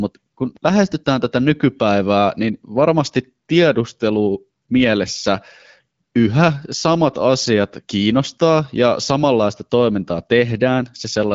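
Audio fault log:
Nothing stood out on listening to this speech clip.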